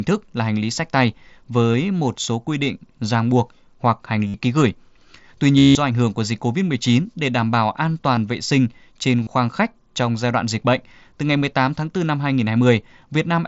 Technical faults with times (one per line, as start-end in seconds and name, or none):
1.73 concealed Bluetooth headset packet loss
4.28-4.34 concealed Bluetooth headset packet loss
5.58-5.75 concealed Bluetooth headset packet loss
8.16 concealed Bluetooth headset packet loss
9.23-9.27 concealed Bluetooth headset packet loss